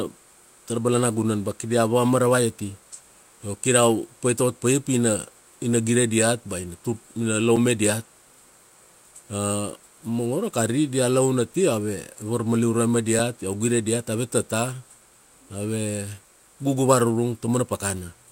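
At 7.56 s and again at 13.19 s the speech drops to a block of digital silence lasting 5 ms, likely an output buffer left unfilled in time. The abrupt cut to silence and back, with no fade, gives a sharp tick rather than an audible gap or a softer, ramped dropout.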